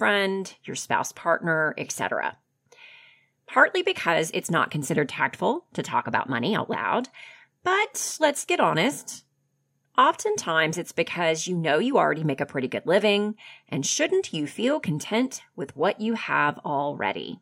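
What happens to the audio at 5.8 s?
Nothing goes wrong at 5.8 s; the speech carries on intact through that moment, with no dropout, click, distortion or other fault to be heard.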